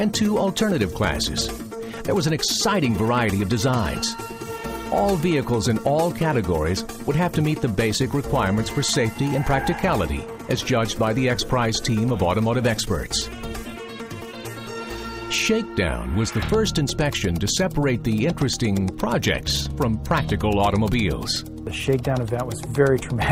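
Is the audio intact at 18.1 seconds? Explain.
Yes, the audio is intact at 18.1 seconds, with no dropout, glitch or other fault to be heard at that point.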